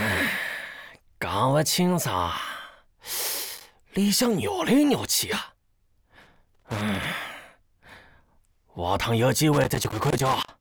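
Loose connector crackle breaks into the audio three times, from 3.45 to 3.75 s, 6.21 to 7.06 s and 9.53 to 10.48 s. It is an irregular scratchy burst where a worn contact intermittently chops the signal path.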